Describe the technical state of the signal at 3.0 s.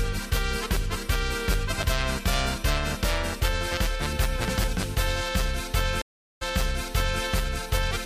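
At 3.0 s the audio is intact, with no dropout, distortion or other fault audible at that point.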